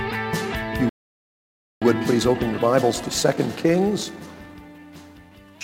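At 0.89 s the sound cuts out in mid-flow. Silence holds for about 0.92 s, until 1.82 s. This is a playback stall. The player likely ran short of data or had its output thread blocked. The sound then resumes.

From 1.82 s to 4.82 s comes time-compressed catch-up. The player trims its backlog by removing small slices and cross-fading the joins. The audio runs about 1.15 times fast at unchanged pitch. It sounds hurried.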